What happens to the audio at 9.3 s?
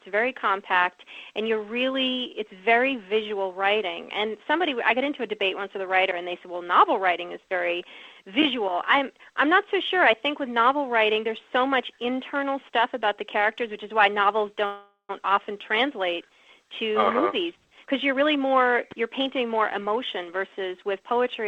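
Nothing goes wrong at 9.3 s; the audio plays through that moment intact, with no dropout, click, glitch or other fault.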